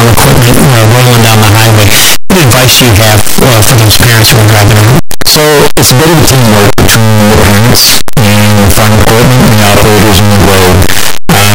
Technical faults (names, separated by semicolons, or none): signed and unsigned mixed up